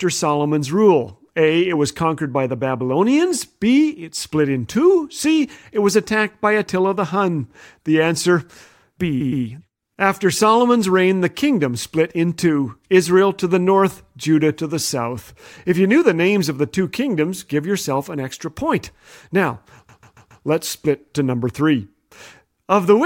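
Repeated frames stutter the speech at 9.20 s, where a 116 ms compressed block replays twice, and at 19.88 s, where a 139 ms block replays four times.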